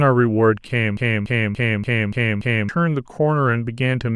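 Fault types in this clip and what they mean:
Broken-record loop: from 0.97 to 2.69 s the speech catches on a 288 ms fragment and plays it six times back to back, whatever should have come in that stretch just gone. That's likely the player or stream stalling and resending the last chunk it had.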